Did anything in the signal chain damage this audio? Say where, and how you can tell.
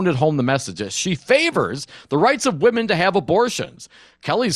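Yes. The damage sits at the codec stage and runs through the whole speech clip. The top end sounds dull, and the upper bands flicker in and out while the remaining detail has a gurgling, granular roughness. That points to likely MP2 compression: Layer II's 32 equal sub-bands are starved of bits, so upper bands switch off and the rest are quantised coarsely, which fits a rate near 80 kbps. Plain low-pass filtering would stay steadily dull instead of flickering and gurgling.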